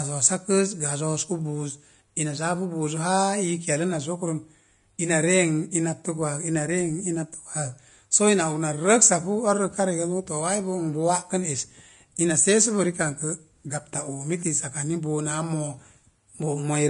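From start to finish the speech has a grainy, hissy edge: the top end stops dead around 10.5 kHz, and the treble that survives sounds rough and noisy rather than detailed, with consonant attacks smeared. That pattern is most likely Vorbis compression at low quality, which fits a bitrate near 33 kbps. The codec drops everything above its cut-off and quantises the remaining high band so coarsely that fine detail turns into noise of similar energy.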